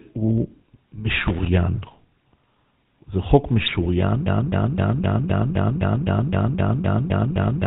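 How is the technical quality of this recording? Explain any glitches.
Quality is poor, with three distinct problems in this speech recording.

GSM full-rate codec, throughout: the voice is rebuilt from a vocal-tract model fed by sparse pulses, with nothing above 4 kHz, giving a plainly audible buzzy, gravelly roughness that fits 13 kbps GSM.

GSM bit errors, 3.66 to 3.87 s: corrupted filter, pitch and gain values reach the decoder, so several frames in a row burst into squawks, pops and gargling.

Broken-record loop, 4.26 s to the end: a 0.26 s fragment repeats exactly, back to back, about a dozen times. The likely cause is a stalled player or stream resending its last buffer, so the audio for that stretch is lost.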